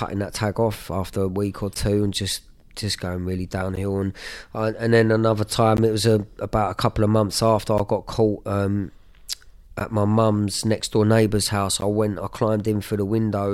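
At 1.74, 3.76, 5.77, 7.78, 9.80 and 11.81 s there's a gap between chunks. Silence sits at each 2 s join, so the speech drops out in a hard-edged 13 ms hole.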